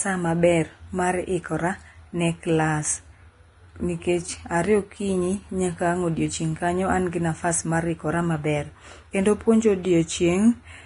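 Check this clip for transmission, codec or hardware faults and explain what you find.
The speech shows one codec fault that lasts the whole way through. It sounds like Vorbis compression, and that is the likely cause. Nothing is present above about 10.6 kHz, so the top of the spectrum is simply missing. The upper treble is quantised so coarsely that its fine detail has turned into noise of similar energy. The result is a hissy, grainy sheen on the speech. Tones sound roughened and attacks are blurred. The damage is heavy, which fits a low bitrate near 30 kbps.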